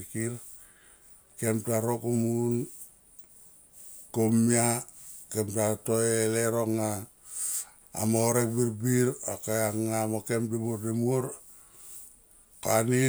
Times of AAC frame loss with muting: none

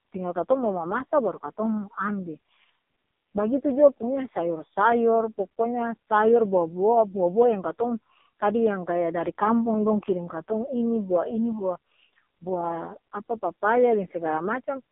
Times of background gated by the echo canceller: none

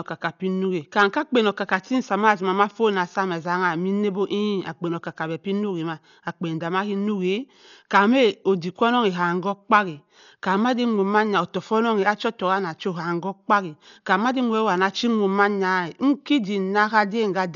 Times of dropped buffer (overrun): none

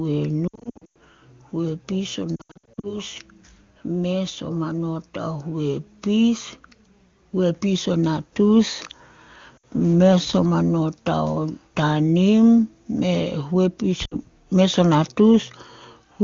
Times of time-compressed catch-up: none

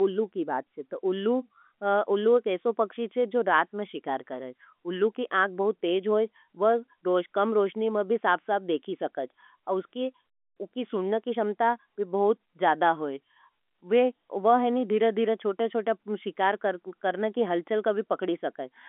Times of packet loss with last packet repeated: none

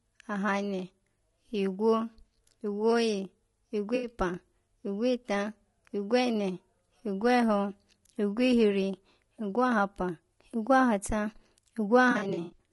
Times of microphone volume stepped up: none

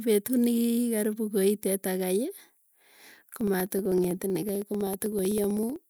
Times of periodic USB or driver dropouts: 2.40-5.82

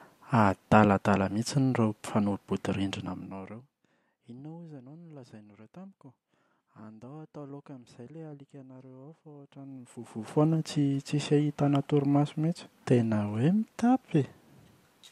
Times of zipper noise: 2.90-3.94, 9.44-10.46

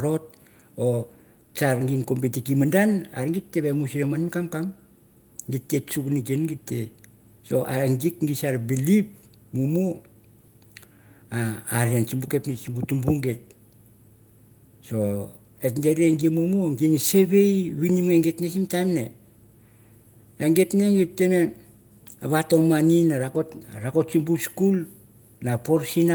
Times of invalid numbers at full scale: none

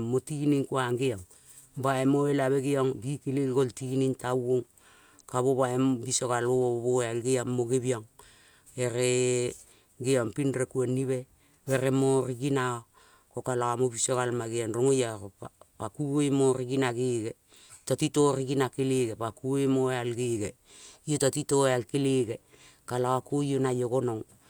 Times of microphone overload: none

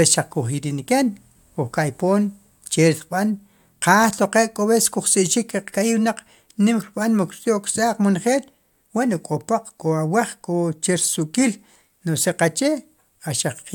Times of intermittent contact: none

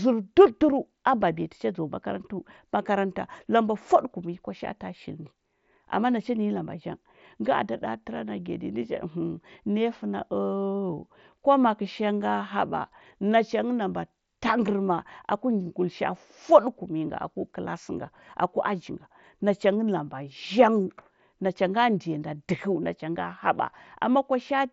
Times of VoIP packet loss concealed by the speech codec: none

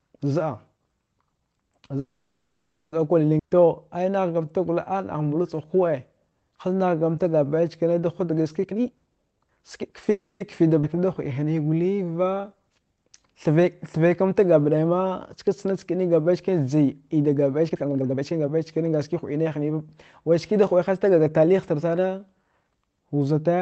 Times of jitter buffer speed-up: 8.65-10.11, 17.69-19.79

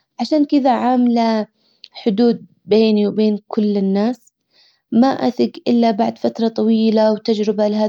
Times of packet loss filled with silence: none

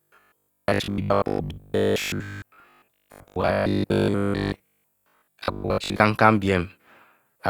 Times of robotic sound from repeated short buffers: 0.02-6.00

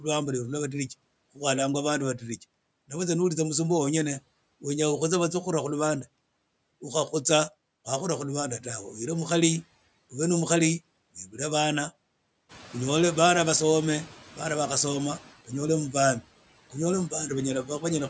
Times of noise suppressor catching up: 12.49-14.14

